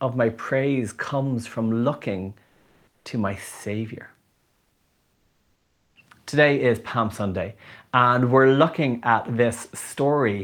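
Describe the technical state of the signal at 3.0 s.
At 3.0 s the background has been swapped for a smooth, steady hiss with none of the texture of the real ambience, shifted in level by about 2 dB, and sitting about 46 dB below the loudest parts. This is comfort noise in place of the background, running from 2.47 to 3.05 s (580 ms). The likely cause is discontinuous transmission, as in Opus DTX: the sender pauses during the quiet stretch and the receiver synthesises shaped noise until the sound resumes.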